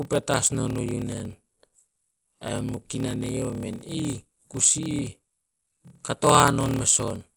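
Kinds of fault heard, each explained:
Dolby Digital compression: The speech sounds dull, with a rough, fluttering noise in place of fine detail. This is likely a low-rate AC-3 style coder, around 64 kbps, which narrows the band and fills unfunded frequency lines with dither noise.
Block size mismatch (padded): One stage hands over shorter blocks than the next expects, so each block ends in a short silent gap. This clip carries a 38.3 Hz buzz and plays at 0.889 times normal speed at roughly normal pitch, which fits 1024-sample blocks read as about 1152.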